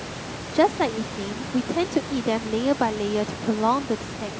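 Speech recording; no technical faults can be heard.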